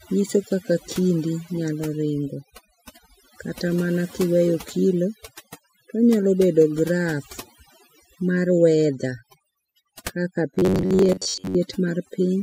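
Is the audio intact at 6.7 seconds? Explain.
No. At 6.7 seconds the speech is affected by overdone noise removal, which runs through the whole clip. The noise reducer is set so aggressively that any frequency band close to its noise estimate gets pulled far down or muted outright, and the softer components of the voice are removed along with the noise. The background collapses to near silence dotted with twinkling specks.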